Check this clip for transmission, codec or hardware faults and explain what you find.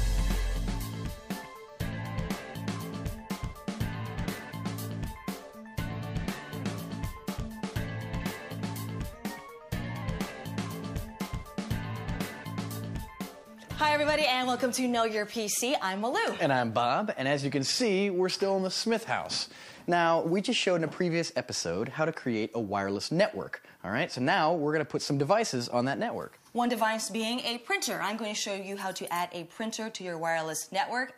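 There's a drift correction step, heard twice. From 9.13 to 10.02 s the audio runs 5.85% fast and about a semitone sharp. From 17.43 to 19.74 s it runs 5.85% slow and about a semitone flat. Each time it then snaps back to normal. The likely cause is a clock-matching resampler jumping its rate to drain or refill its buffer.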